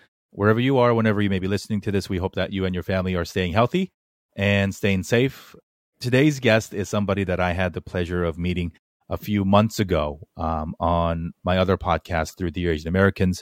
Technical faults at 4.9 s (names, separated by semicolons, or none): none